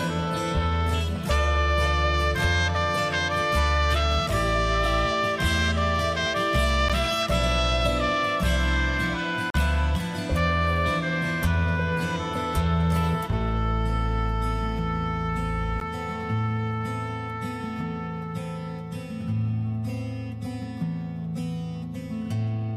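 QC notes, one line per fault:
6.89 s, block of digital silence: an 11.6 ms drop to zero, which fits a 512-sample buffer going unfilled. At that length it comes across as a tick or dip, not an audible hole.
9.50 to 9.54 s, block of digital silence: a 41 ms gap, long enough to hear as a short hole, with the audio cutting out and back with no fade.
15.80 s, block of digital silence: another 11.6 ms, 512-sample dropout, heard as a tick or dip.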